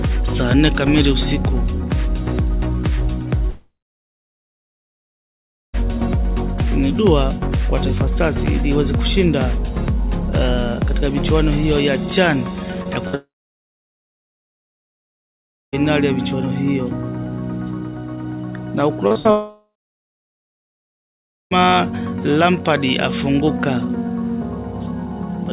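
First thing at 3.5 s is a long network dropout running to about 5.76 s. The last sound carries on briefly as a fading buzz or hiss, then you get roughly two seconds of near silence before the audio picks up again further along, with about 2.2 s simply gone. Most likely no audio was getting through for that whole stretch, so the receiver had nothing to play and just ran its fill out.

Around 12.84 to 12.87 s there's a short concealed packet loss, only about 20 ms of missing audio. The receiver patched the hole by extending whatever was sounding and then blending back into the real signal, so it comes across as a tiny smear rather than a clear gap.

Right after, from 13.07 to 13.15 s, comes a burst of packet loss, about 60 ms dropped in a row. The fill continues the last sound and turns it down as it goes, so it's a short held buzz or fading hiss, and the audio resumes later on without the bit in between. 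That burst runs straight into the second dropout, 13.15 to about 15.75 s, likely another network outage, with roughly 2.6 s missing and mostly silence.

Then 19.07 to 19.27 s has repeated packet loss with that robotic sound: three gaps close together, the longest about 57 ms, and close to 60 percent of that span is patched rather than real. Each patch barely finishes before the next hole, so it goes choppy. The third dropout follows at 19.31 to about 21.53 s, around 2.2 s lost, likely a network outage, with a short fade then near silence. Underneath all this, nothing reaches above 4 kHz, consistent with the G.711 mu-law call path at 64 kbps.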